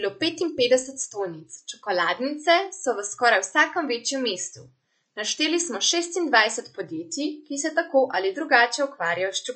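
Vorbis compression damage runs through the whole recording, from start to finish, and it is plainly audible on the speech. The upper frequencies are cut off and what remains of the treble has turned hissy and granular, with consonant onsets smeared and tones sounding rough. The likely cause is Vorbis encoding at a low bitrate, which fits a setting near 30 kbps: the encoder keeps a smooth spectral outline plus a coarsely quantised residue, which replaces fine high-frequency detail with coarse, noise-like filler.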